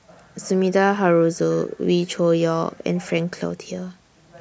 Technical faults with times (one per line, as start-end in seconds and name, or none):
none